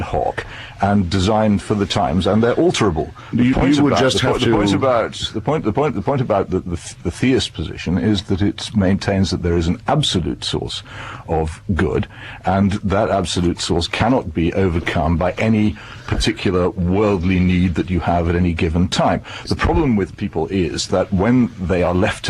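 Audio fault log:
14.45–19.09 s call bitrate drop: the call's bandwidth estimate collapsed and the encoder was forced onto far fewer bits, which fits a fall from 64 to 28 kbps, holding at its lowest for 2.81 s. Coarser coding leaves the sound rough and watery until the bitrate recovers.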